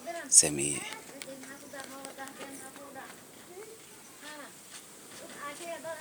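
Nothing here jumps out as a technical fault at any point in the speech recording, so there's no problem to point to.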